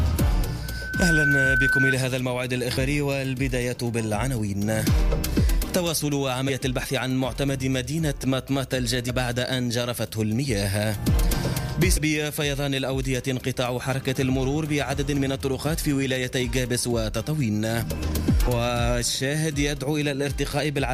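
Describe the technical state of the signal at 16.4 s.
At 16.4 s the signal is intact, with no dropout, distortion, glitch or other audible fault at that point.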